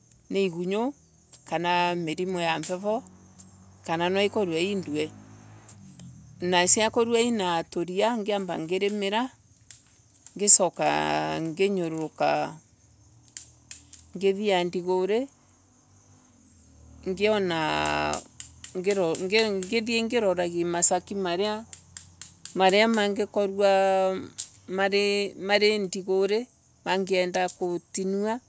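Speech with no technical faults to report.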